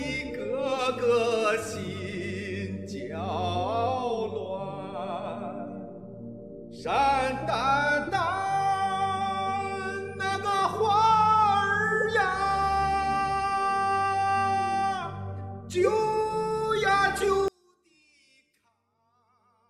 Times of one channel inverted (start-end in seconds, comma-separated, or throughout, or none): 17.48-19.69